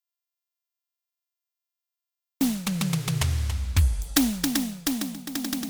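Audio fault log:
0.00–2.41 s, audio dropout to silence: the music begins in total silence with no room tone, likely from lost input, then cuts in mid-flow.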